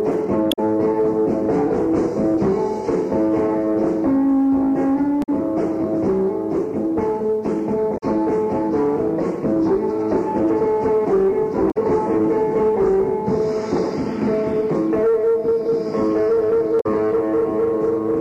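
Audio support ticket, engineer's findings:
Damaged data in a compressed stream: corrupted bytes in the encoded file/stream. Decoder misreads affected frames, loses sync, hunts for next valid frame header. Audible as short chirp/blip, roughly 0.1 s each, at 0.49–0.59 s, 5.20–5.29 s, 7.94–8.03 s, 11.67–11.77 s, 16.77–16.86 s. Probable component: storage or transport layer upstream of decoder, not playback chain. Recurring roughly every 3–5 s.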